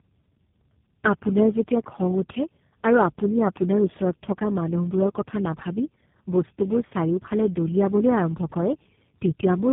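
From start to finish the speech sounds rough, muffled and warbly, with nothing above about 3.8 kHz. This is tandem speech coding: roughly four low-rate speech coders in a row, fitting repeated GSM full rate ending in G.729A, each compressing the previous one's already degraded output.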